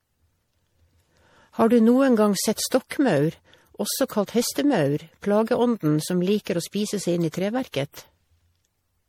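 Swirly, smeared and hollow across the whole speech clip, with blurred consonant attacks and nothing above 19.6 kHz, this is generation loss, likely from about four rounds of lossy MP3 re-encoding, each requantising on a shifted frame grid at what sounds like 64 kbit/s.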